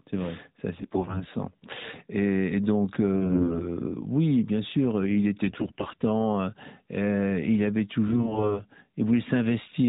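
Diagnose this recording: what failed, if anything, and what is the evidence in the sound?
AMR bit errors on the network's radio link cause hoarse, gargly bursts at 0.78–1.24, 3.16–3.65 (roughest), 5.46–6.02 after "bien sûr il", and 8.08–8.63 s. Flipped weakly protected bits misplace excitation pulses and skew gain and spectrum values.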